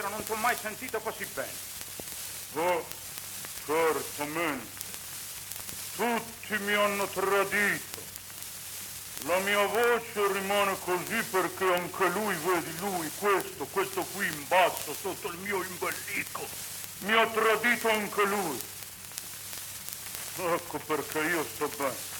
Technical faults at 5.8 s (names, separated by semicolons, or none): word clock ticks